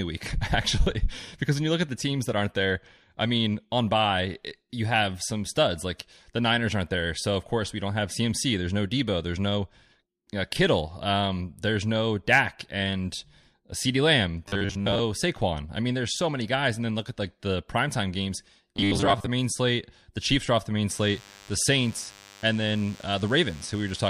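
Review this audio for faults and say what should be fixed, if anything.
Audio likely arrived too seldom, so the software looped 10 ms fragments while skipping real speech, producing robotic sound from repeated short buffers at 14.48 to 15.00 s and 18.76 to 19.28 s, after "like the primetime games" and before "main slate". The loop imposes a rigid 100 Hz metallic buzz, covering most of the first stretch and about half of the second. Fix it by giving the audio path enough buffering and steady delivery so gaps never need filling.

A nearby DECT cordless phone or base is bursting every 10 ms and the audio circuit is rectifying it, leaving DECT cordless phone buzz from 20.89 s, after "are off the main", to the end: a thin, harmonic-rich 100 Hz buzz about 25 dB below the speech. Move the DECT equipment away from the recording gear and cabling.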